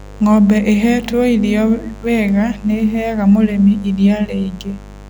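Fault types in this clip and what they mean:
Mains buzz, throughout: switching spikes from a dimmer, rectifier or unshielded lead get into the speech path twice per 50 Hz cycle, stacking harmonics up into the kilohertz range, so a raspy, unchanging buzz sits roughly 20 dB under the speech.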